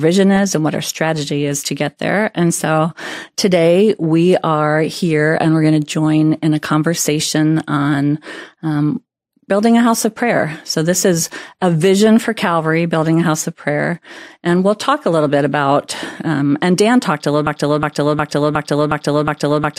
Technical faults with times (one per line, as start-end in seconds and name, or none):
17.47-19.79 broken-record loop